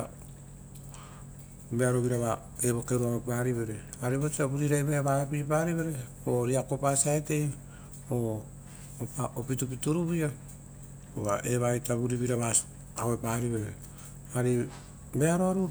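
No technical faults are audible anywhere in the speech.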